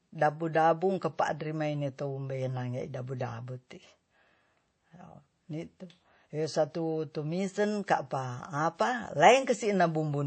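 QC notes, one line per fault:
Throughout, transcoding between lossy codecs: the speech sounds dull, with nothing above 8.3 kHz, and two kinds of coding artefact are layered together. The cause is likely a low-rate MP3, fitting 32 kbit/s, re-encoded to WMA at 64 kbit/s, which kept the first cut-off.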